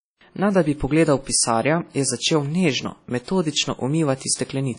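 From start to finish the speech carries WMA compression damage, and it is plainly audible: consonants and vowel onsets ring and smear, and a washy hiss rises and falls with the level of the talking. Nothing remains above 10.1 kHz, which fits a low bitrate around 32 kbps. Long transform blocks likely spread quantisation noise across tens of milliseconds and dropped weak spectral lines. Unlike a plain low-pass filter, the damage breathes and smears in time.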